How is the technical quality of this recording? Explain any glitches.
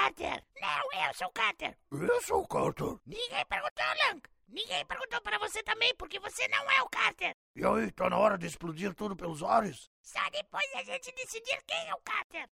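No technical faults are audible.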